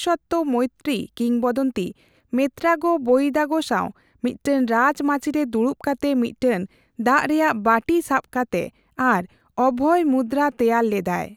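No technical faults can be heard.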